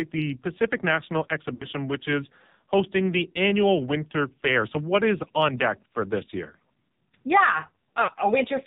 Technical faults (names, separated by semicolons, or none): AMR narrowband mobile codec; lost AMR speech frames